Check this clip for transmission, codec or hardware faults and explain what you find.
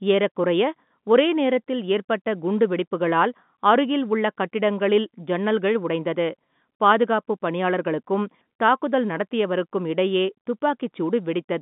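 Nothing here points to a transmission, codec or hardware problem: the speech comes over an ordinary telephone line with G.711 coding, so the sound sits in the usual band of roughly 150 Hz to 3.6 kHz with nothing above about 3.8 kHz, just as a working phone line should.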